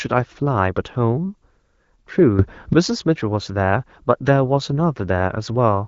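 At 2.39 s the speech and its background noise leap up together by about 12 dB: a sudden gain jump. The level holds until 2.73 s, then drops back. A digital gain change applied without any ramp is the likely cause.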